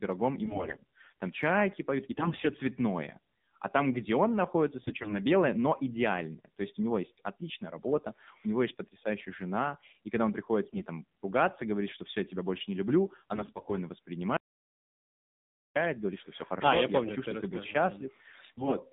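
Throughout, the speech carries AMR narrowband mobile codec coding, band-limited to roughly 150 Hz to 3.7 kHz, with a buzzy, synthetic quality that fits a low rate near 7.4 kbps. AMR bit errors at 0.44–0.77 s, 2.12–2.49 s, 4.84–5.17 s, 10.64–10.87 s, 13.34–13.75 s and 18.52–18.75 s misplace excitation pulses and skew gain values, turning the voice hoarse and gargly while pitch holds. An audio dropout to silence from 14.37 to 15.76 s cuts 1.39 s to silence, likely from a lost input link.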